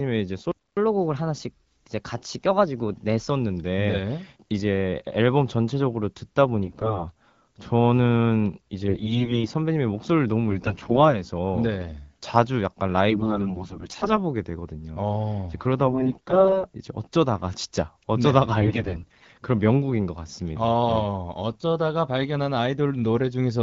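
At 0.52 s the speech cuts out for 253 ms in a playback stall, likely the player running dry. From 0.77 to 3.30 s a catch-up at higher speed runs it 1.1 times fast, pitch raised about a semitone and a half. AMR bit errors then hit at 6.64–7.07, 8.88–9.49, 10.49–10.97, 13.10–14.12, 15.86–16.65 and 18.61–19.28 s: corrupted frame bits misplace pulses and parameters, making the speech hoarse, scratchy and gargly.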